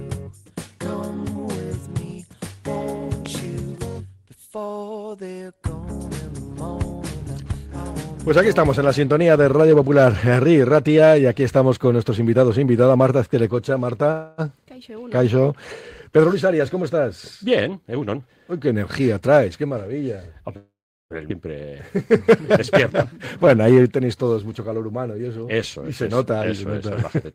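A loud pop at 3.26 s, likely an electrical pulse from a switch or static, stands about 10 dB above the surrounding sound and shows as a thin vertical spike on the waveform and a full-height stripe on the spectrogram. At 14.11 to 14.41 s a call audio freeze, likely from delayed packets emptying the jitter buffer, stretches the last sound into a fading 265 ms fill before the audio resumes where it stopped. The spectrogram shows this as smeared, frozen harmonics with nothing lost. From 16.19 to 19.00 s a jitter buffer speed-up trims short pitch-period pieces repeatedly, running the audio at about 108% with pitch unchanged and removing roughly a fifth of a second. The waveform looks slightly compressed in time there. A second, longer freeze at 20.57 to 21.13 s fills 537 ms, and the last 370 ms decays to flat silence, seen as a blank band in the spectrogram. Right after it, between 21.28 and 21.33 s, a skip ahead drops around 0.4 s of audio and joins both sides almost directly. 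That appears as an abrupt splice in the waveform with a tiny 12 ms bridge. From 21.70 to 23.63 s a jitter buffer slow-down repeats pitch periods to rebuild the reserve, playing at 95% speed and adding 98 ms. Its drawn-out sounds show as slightly elongated, repetitive harmonic patterns.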